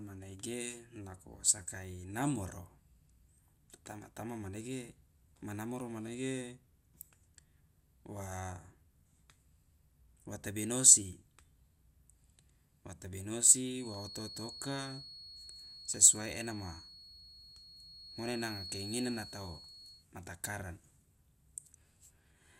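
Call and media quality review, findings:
Feedback whistle, 13.74 to 20.07 s: thin steady tone at 4.3 kHz, roughly 15 dB below the speech, level swelling and fading slowly. Likely cause: loudspeaker-to-microphone acoustic loop at the edge of instability, so one frequency sustains without building into howl. Check endpoint echo control, speaker gain and mic placement.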